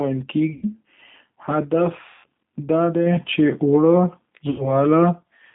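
The whole clip is speech carried through the G.729 codec at 8 kbit/s. The line band runs from about 150 Hz to 3.6 kHz, so nothing bright survives. The codec rebuilds each short frame from a vocal tract filter, a pitch predictor and a few pulses. The damage is plainly audible. Speech sounds rough, thin and slightly synthetic throughout.

At 0.53 to 0.66 s comes the first VoIP packet loss concealed by the speech codec. About 90 ms of audio went missing. The decoder filled the gap by repeating its last pitch and filter with falling gain. The result is a short smear that fades out. Because each frame builds on the one before, the speech stays weak for a moment after it resumes.

At 2.09 to 2.25 s the same concealment returns over a longer gap of about 150 ms. The stretched tone lasts longer and decays further before speech recovers.

At 3.06 s the microphone volume is stepped up by about 3 dB, just before "چې اوړه". 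Speech and background jump louder together in one step. This fits call software raising a quiet input.

From 4.50 to 4.78 s, right after "چې اوړه", packet loss concealment strikes again. About 90 ms was lost. Fading output covers the gap and weakens the speech after it.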